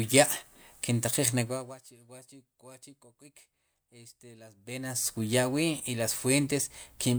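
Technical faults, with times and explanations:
Nothing stood out as a technical fault on listening to the speech.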